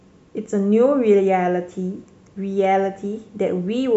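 Nothing in this recording stood out as a technical fault on listening.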